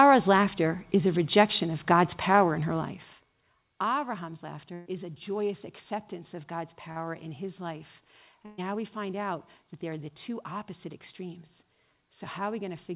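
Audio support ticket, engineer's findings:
Burst of packet loss at 4.74–4.88 s and 8.46–8.60 s, each about 120 ms. Jitter buffer and concealment: receiver extends the last sound and fades it, giving a held buzz or dying hiss. Audio then resumes further on, with that stretch skipped.

Short concealed packet loss at 6.92–6.98 s, about 40 ms. Decoder-side concealment filling a late or lost packet from the preceding sound, then cross-fading back. Heard as a brief smear or wobble. A short consonant there can drop out.

The band stops at 4 kHz, which fits a narrowband G.711 mu-law call path.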